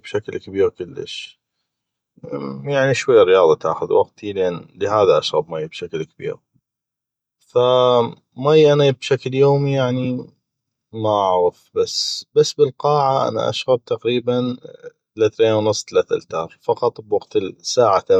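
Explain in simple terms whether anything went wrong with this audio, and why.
Nothing went wrong here: the speech comes through steady and natural the whole way, with no odd moments anywhere to point to.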